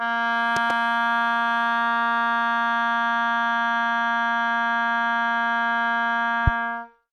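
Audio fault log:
0.56–0.73 s and 6.47–6.50 s, loud pop: sharp thumps about 15 dB above the music, two in quick succession in the first event and one in the second, with the music continuing underneath. Likely a sudden voltage step or pulse, such as a switch, static or driver glitch, shaped by the following circuitry.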